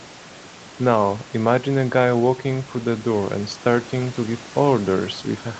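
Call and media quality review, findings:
No faults found in this call audio.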